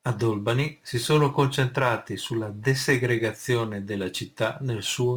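Throughout, a gritty, inharmonic fizz rides on the louder, brighter speech. This is crude rate conversion: samples were simply repeated without filtering, which fits a 44.1 kHz to 48 kHz change.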